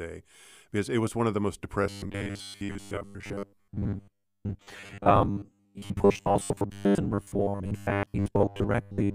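Robotic sound from repeated short buffers takes over this speech recording at 1.83 s, right after "one of the most", and lasts to the end. The audio becomes a rigid, metallic buzz at 100 Hz that only loosely tracks the words. The likely cause is new audio arriving too seldom, so the same 10 ms segment is replayed in place of much of the real signal, roughly seven-tenths of it, forcing that fixed buzz pitch.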